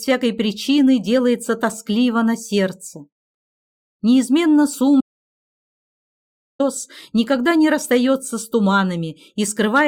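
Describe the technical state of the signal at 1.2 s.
At 1.2 s the signal is intact, with nothing audibly wrong at that point.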